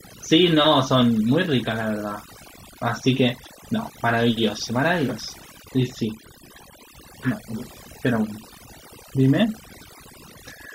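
A speech recording with overdone noise removal from start to finish: the suppressor was pushed so hard that individual frequency bands drop out whenever they sit near its noise estimate, taking the softer parts of the voice with them. Between phrases the background drops and breaks up into twinkling specks. A noise gate would instead shut the whole signal at once, leaving a clean, unspeckled silence.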